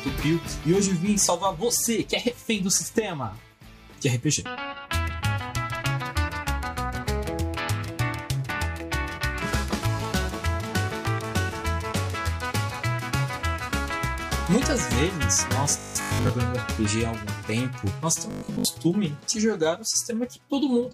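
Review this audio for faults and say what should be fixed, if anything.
Robotic sound from repeated short buffers at 15.79–16.29 s and 18.31–18.67 s: a rigid 50 Hz buzz, likely from about 20 ms chunks being replayed over most of each span. The waveform shows identical repeating cycles, and the spectrogram shows evenly spaced 50 Hz harmonic lines. Larger jitter buffers or steadier audio delivery would prevent it.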